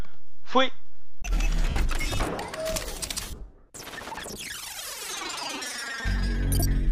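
At 1.69 s there is a brief gap where lost LE Audio frames break up the sound for 70 ms, which fits seven consecutive 10 ms frames. The decoder hides it by repeating the last spectrum with scrambled signs. Tones turn to a short noisy smear. At 3.27 s a looser cluster of losses spreads over 140 ms. About 90 ms goes missing, the longest stretch around 40 ms. It sounds like a noisy smear.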